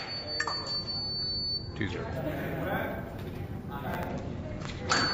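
From 2.16 to 4.08 s, imaging from sample-and-hold upsampling (16 kHz to 48 kHz) adds metallic fizz about 22 dB down, seen on a spectrogram as a mirrored band from 8 to 16 kHz.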